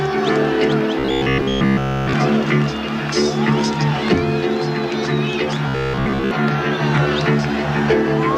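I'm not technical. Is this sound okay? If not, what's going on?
No. Sound data likely arrived too slowly, so the software kept replaying its last sliver, which fits about 15 ms, skipping the real audio. This robotic sound from repeated short buffers turns most of 0.99–2.13 s and 5.68–6.31 s into a rigid, metallic buzz at about 67 Hz.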